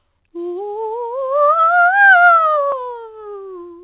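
Nothing goes wrong anywhere in this bit of music, which just has the narrow, phone-line sound of a call path, with nothing above 4 kHz getting through, which fits G.711 A-law coding.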